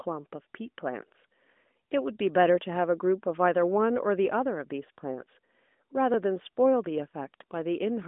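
At 6.14 s the speech jumps, and at 7.42 s it happens again with a bigger skip. There's no gap of silence either time. The audio just snaps forward, losing roughly 20 ms at the first spot and something like 70 ms at the second. That's likely a dropped buffer (overrun), where the software didn't pull its samples in time and the hardware wrote over them. The band-limited phone-line sound, with nothing above 3.7 kHz, stays the same across both joins.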